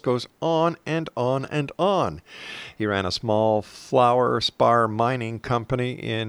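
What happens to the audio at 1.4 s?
Nothing goes wrong at 1.4 s; the speech passes through that moment intact, with no dropout, click or distortion.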